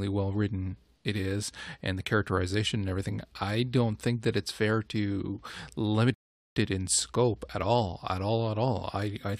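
At 6.14 s, right after "it's fair to limit", a rebuffering stall cuts the speech to silence for about 0.42 s, as playback starved of downloaded audio and waited. It resumes exactly at "it in scope at", losing nothing. The waveform shows a flat gap and the spectrogram a blank vertical band.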